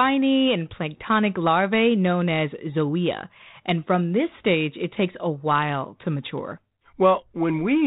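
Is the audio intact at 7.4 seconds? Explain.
Yes, the speech at 7.4 seconds is intact, with no dropout, glitch or other fault at that moment.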